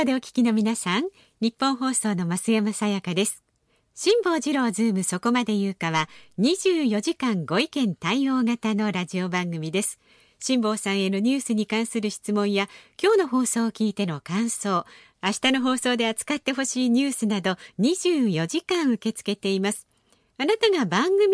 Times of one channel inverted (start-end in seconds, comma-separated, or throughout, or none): none